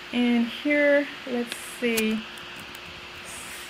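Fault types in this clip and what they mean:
No faults detected: the signal path is intact, with no dropouts, distortion or timing irregularities to report.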